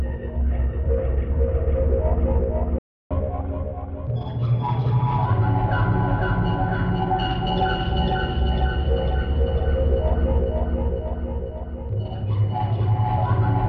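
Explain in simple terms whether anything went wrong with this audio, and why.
At 2.78 s the sound cuts out to silence for about a third of a second, resuming at 3.11 s. This is a playback stall: the player most likely ran short of audio data or was briefly held up, so it had nothing to output.

From 3.11 s to 5.25 s everything plays a little fast and sounds slightly higher, around two semitones up, before settling back. This is catch-up at higher speed: the player runs 1.15 times faster to make up the time lost in the stall.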